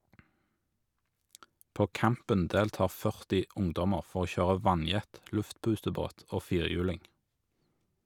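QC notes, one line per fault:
No faults heard on this speech clip; nothing to log.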